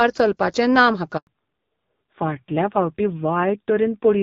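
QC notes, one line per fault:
1.17 to 1.27 s, handover gap: right after "चलपाचें ना" the speech cuts to silence for 100 ms while the call switches networks and no speech frames arrive. The waveform drops to a flat line within a few tens of milliseconds, and the spectrogram shows a clean blank vertical band across all frequencies.
1.27 s to end, fallback to narrowband: after the switch the call leaves AMR-WB at 12.65 kbit/s, light codec damage, for AMR-NB at 5.9 kbit/s, so nothing above 4 kHz survives. The speech turns dull, boxy and rougher. On a spectrogram the energy stops at a hard ceiling at 4 kHz.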